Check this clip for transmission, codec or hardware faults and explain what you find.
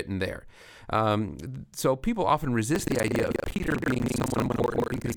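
One hardware fault is present: buffer tearing, from 2.72 s to the end of the clip. The program filling the playback ring buffer and the device reading it have drifted out of step, so they cross inside every period. A little under half of each period replays audio from roughly 150 ms earlier, with abrupt joins on either side. This produces a rattling, robotic 25 Hz buzz that appears only while speech is present. On a waveform, hard discontinuities recur every 40 ms. A spectrogram shows vertical broadband lines at that spacing, with harmonic traces jumping between frames.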